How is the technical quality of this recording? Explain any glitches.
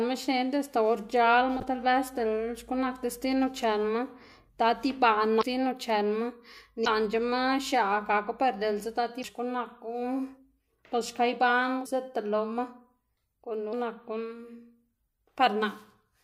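The recording is marred by five brief glitches from damaged data in a compressed stream. Corrupted bytes make the decoder misread frames and lose sync until it finds the next frame header, so the speech breaks into short squawks or blips at 5.39–5.43 s, 6.83–6.87 s, 9.21–9.25 s, 11.85 s and 13.69–13.73 s, each lasting about 16 to 40 ms.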